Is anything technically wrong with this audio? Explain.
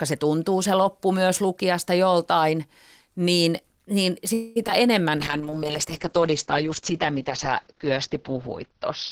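Yes. There are three kinds of fault, all from 4.33 s onward.

From 4.33 to 4.58 s there is a call audio freeze. The last sound is stretched into a fading buzz or hiss for about 225 ms. Then the audio resumes exactly where it left off. Nothing is lost, but everything after this point runs about 225 ms late. This is likely packets stalling in transit until the jitter buffer emptied, so the receiver had to invent sound while waiting.

Right after, two short concealed packet losses follow back to back, at 4.64 to 4.67 s and 4.67 to 4.70 s. Each drops about 20 ms of real audio. The decoder patched the holes by extending what it had just played, then blended back in. The result is a quick smear or wobble. Any brief consonant there may simply vanish.

From 5.18 s to the end there is a call bitrate drop. The sound turns muffled and rough. Its top end is cut off near 6 kHz instead of reaching about 20 kHz. 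The dullness and coarseness point to the encoder falling from around 32 kbps to around 8 kbps after the connection's bandwidth estimate fell. It stays at that low quality for the last 3.7 s and never recovers.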